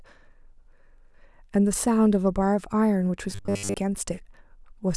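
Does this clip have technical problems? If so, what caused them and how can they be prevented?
Yes. From 3.31 to 3.74 s the speech collapses into a rigid, metallic buzz pitched at 100 Hz that only loosely tracks the words. That's robotic sound from repeated short buffers. Fresh audio likely wasn't arriving fast enough, so the playback side kept looping the last slice, which fits a 10 ms buffer, while the real audio in between was dropped. Most of that stretch is repeats, so the loop rate sets the buzz. To prevent it, give the stream a bigger jitter buffer and keep the processing thread from stalling.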